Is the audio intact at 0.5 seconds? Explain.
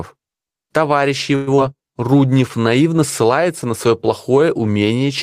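Yes, the speech at 0.5 seconds is intact, with no audible fault at that moment.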